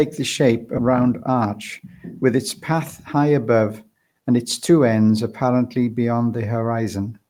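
Speech clip, and right after "the shape" at about 0.77 s there's a skip ahead: roughly 0.7 s of audio is simply gone, with no fill, and the two sides butt straight together. That's what you get when a backlog of audio is dumped to catch up while later packets are already waiting. Then from about 0.87 to 2.34 s, just before "its path", there's a jitter buffer speed-up. The receiver trims tiny pitch-period slices over and over to drain excess buffered delay, so the talking runs about 6% fast at unchanged pitch and sounds a bit rushed, losing around a tenth of a second overall.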